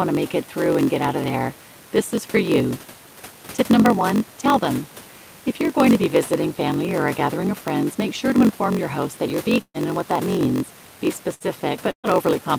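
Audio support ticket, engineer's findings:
Steady buzz at about 47 Hz throughout, speech slowed to 0.938x at normal pitch. Block size mismatch (padded): writer's short blocks zero-filled to reader's size, which fits a 1024-sample read buffer.

Burst of packet loss at 9.61–9.77 s, 11.34–11.43 s and 11.91–12.07 s: last sound stretched and faded, brief silence in the first and third, then jumps ahead about 120, 60 and 120 ms. Receiver concealment covering lost packets. Room noise about 25 dB below speech.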